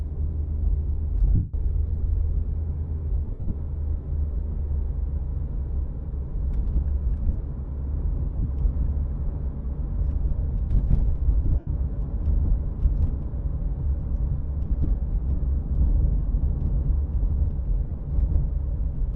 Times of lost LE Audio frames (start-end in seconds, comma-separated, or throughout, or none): 1.35-1.54, 3.27-3.51, 8.36-8.45, 11.59-11.67, 17.87-17.99